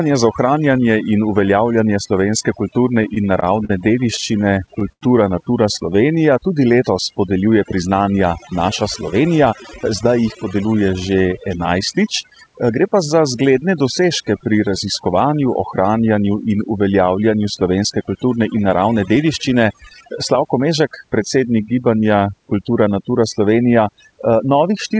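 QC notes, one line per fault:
Throughout: overdone noise removal. A noise reduction stage set far too strong pulls individual frequency bands down whenever they sit near its noise estimate, taking quiet speech detail with them. The background drops and breaks into twinkling specks. A spectrogram shows isolated flickering dots in the gaps and holed, patchy harmonics.
3.03–3.70 s and 4.16–5.02 s: repeated stalls (stutter). The first begins after "ohranjanje in uveljavljanje slovenske". Late packets kept emptying the jitter buffer, so the receiver stretched the last sound until data resumed. There are four short stalls, the longest 43 ms, then seven more, the longest 87 ms. Nothing is lost, but speech drags and stutters. The waveform shows repeated copies of the preceding cycles.
5.90–6.42 s: jitter buffer slow-down. To rebuild its reserve, the receiver repeated single pitch periods several times in a row, adding about 52 ms. 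Speech runs at roughly 91% speed with unchanged pitch, so sounds are drawn out. The waveform shows identical periods repeated, with harmonics stretched in time but not in frequency.
8.52–9.47 s and 20.03–20.80 s: jitter buffer speed-up. These follow "letos podeljuje priznanja" and "kulturne in naravne dediščine". With excess audio queued, the receiver cut short pitch-period pieces to reduce delay, about 70 ms at 108% speed, then about 40 ms at 105%. Speech sounds hurried with unchanged pitch. The spectrogram shows compressed syllables with intact harmonic spacing.
The call path's G.722 codec leaves nothing above 8 kHz, which a spectrogram shows as an empty band at the top.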